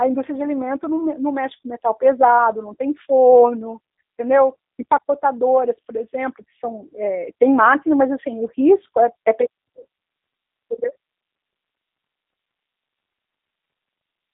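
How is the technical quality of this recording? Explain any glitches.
The quality is limited by one fault that runs through the whole clip. The speech has passed through a G.729 codec, which fits an 8 kbit/s G.729A link. That codec models the voice as a filter plus a pitch predictor and a handful of pulses per frame, so the speech comes out rough and slightly synthetic. The codec damage is plainly audible. The band is squeezed to roughly 250 Hz to 3.7 kHz, with nothing above 3.8 kHz.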